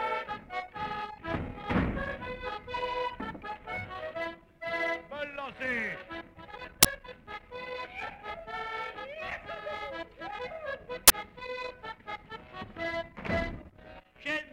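Two uninitialised buffer bursts interrupt the audio, at 6.83–6.85 s and 11.08–11.10 s, each a harsh, loud 23 ms blast of digital noise where leftover memory was played as samples, which fits a 1024-sample buffer. The waveform shows abrupt blocks, and the spectrogram shows bright broadband columns.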